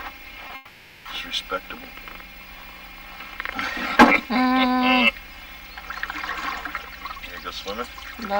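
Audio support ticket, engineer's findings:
Short concealed packet loss, 0.47–0.51 s: about 20 ms of packets missed the decoder, concealment extended the preceding sound and blended back. Brief smear or wobble.

Long network dropout, 0.55–1.07 s: likely a stall in the network path, half a second of audio never arrived. Receiver stretched the last sound into a fading buzz or hiss, then audio resumes with that stretch missing.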